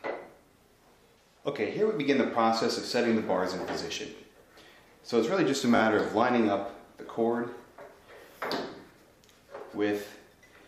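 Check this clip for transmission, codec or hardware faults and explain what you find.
Two repeated buffer faults, at 4.16 to 4.20 s and 5.76 to 5.80 s. Fresh audio arrived late, so the device replayed its last block twice, a length that fits a 20 ms buffer. Each repeat is heard as a brief buzzy stutter with hard joins, and nothing appears to be lost.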